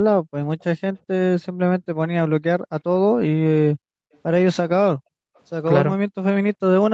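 Echo leak at 0.59 to 0.64 s: a faint, brief copy of the speech returns about 376 ms late, roughly 35 dB down, likely from an echo canceller that let loudspeaker sound through. Background gated by the echo canceller at 2.59 to 2.70 s and 3.75 to 4.07 s: the room sound falls away by about 40 dB as the microphone is pushed down, then returns. The same echo leak recurs at 4.13 to 4.19 s, about 388 ms late and even fainter. The gating returns at 4.96 to 5.35 s, and the echo leak follows straight after at 5.35 to 5.40 s with the same 388 ms delay.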